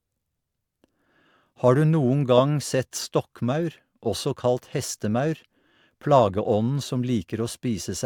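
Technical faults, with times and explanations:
The speech signal shows no technical faults anywhere in the recording.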